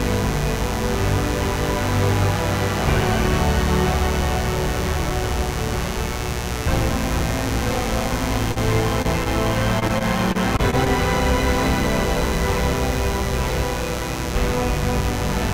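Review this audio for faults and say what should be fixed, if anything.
Mains buzz runs through the whole clip: a steady, raspy 60 Hz buzz, fairly loud at roughly 10 dB below the wanted sound. Sharp switching spikes from a dimmer, rectifier or poor shielding enter twice per mains cycle, spreading harmonics into the kilohertz range. To prevent it, fix the grounding and shielding, or move the recording chain away from dimmers and switching supplies.

A short stall from a late packet occurs at 8.52 to 8.58 s. A packet arrived late, the jitter buffer emptied, and the receiver held the last sound for about 42 ms before resuming where it left off. Nothing is lost, but that sound lingers too long, and the delay grows by 42 ms. To prevent it, use a deeper or adaptive jitter buffer.

Short concealed packet loss occurs at 9.02 to 9.06 s. About 20 ms of audio never arrived in time. The receiver patched 24 ms by extending the preceding sound and then blending back into the real signal, which leaves a brief smear or wobble. 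To prevent it, improve network reliability or add forward error correction.

Repeated packet loss, heard as robotic sound, occurs from 9.79 to 10.88 s. About seven holes follow in quick succession, the longest 22 ms. Together they remove about 120 ms, and concealment fills roughly 11% of the stretch, making it choppy. To prevent it, address the congestion or loss on the link and enable redundancy.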